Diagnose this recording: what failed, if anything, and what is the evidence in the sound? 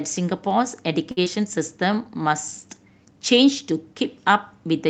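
From 1.11 to 1.23 s the speech hangs on one sound, held too long with a slight buzz or dip, then resumes where it left off. This is a short stall from a late packet: the jitter buffer ran dry and stretched the last sound for about 55 ms until the packet arrived.

Right after, from 1.24 to 1.28 s, there is a brief smear where a sliver of speech goes missing. This is short concealed packet loss on the network: about 20 ms never reached the Opus decoder in time, and the receiver filled the gap by extending the preceding sound before blending back.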